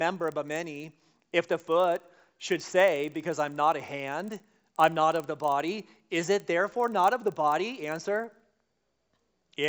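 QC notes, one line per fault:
throughout, resampler restarted on every block: each 40 ms block, likely 16 kHz to 48 kHz, was converted alone, leaving edge errors heard as a 25 Hz buzz under the speech.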